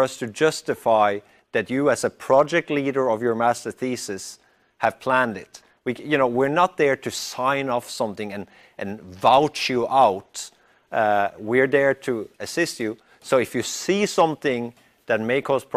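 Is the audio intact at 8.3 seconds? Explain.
Yes, the audio at 8.3 seconds is intact, with no dropout, click, distortion or other fault at that moment.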